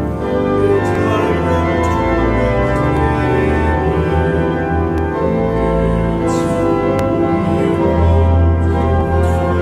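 A short click or stutter recurs at a steady two-second rhythm through the audio, at 0.95, 2.97, 4.98, 6.99 and 9.01 s. These are overlapping chunks: the audio was handled in 2.0-second blocks, and each new block began about 13 ms before the previous one finished, so that sliver plays twice at every join. The doubled fragment breaks the waveform's continuity, which is what makes each seam audible.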